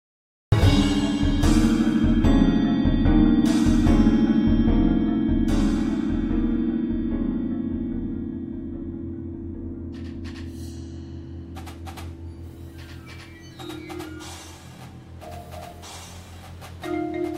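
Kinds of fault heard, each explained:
Cut-off start: capture began late, so the audio sits in digital silence until 0.52 s, then jumps straight into a sound already underway, with no natural attack.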